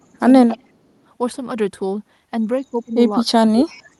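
A speech recording with two kinds of trouble. The first is speech suppressed in double talk, heard from 0.0 to 0.24 s, from 0.55 to 0.85 s, and from 2.62 s to the end: the voice is pushed down by roughly 30 dB in places, most likely because the echo canceller turned everything down while both sides were talking at once. Unlike a packet-loss dropout, these dips follow the overlap in the conversation rather than landing at random. The second is echo leak at 0.48 to 0.57 s and 3.67 to 3.76 s: a faint copy of the voice trailing it by 276 ms, about 20 dB below the speech the first time and about 30 dB below it the second time. This is likely the far end's canceller letting some of its loudspeaker's sound back through its microphone. Room reverberation would blur smoothly into the voice, whereas this is a distinct, delayed, short scrap. The call path's upper band limit near 12 kHz fits an Opus connection.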